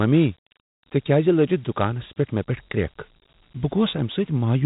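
Dialogic VOX ADPCM runs through the whole clip, from start to finish. The speech has been squeezed into 4-bit adaptive differential samples, a density that fits a 32 kbit/s stream at 8,000 samples a second, so each sample stores only a coarse step from its predecessor. The quantisation error this leaves is plainly audible as a gritty hiss that rides along with the speech, and the band stops near 3.8 kHz, leaving it dull and telephone-like.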